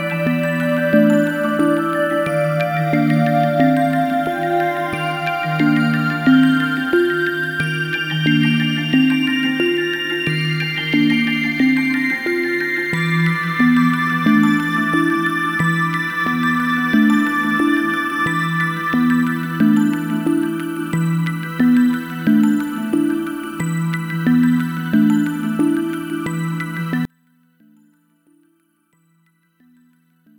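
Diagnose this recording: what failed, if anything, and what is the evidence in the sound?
From 27.05 s to the end at 30.39 s, the sound collapses to a faint residue about 38 dB below its earlier level when the stereo pair is summed to mono. A waveform shows the envelope shrinking to a sliver at 27.05 s, and a spectrogram shows the low end and centred energy vanishing. The likely cause is one channel inverted, probably a polarity swap in the analogue wiring, so the content common to both channels cancels.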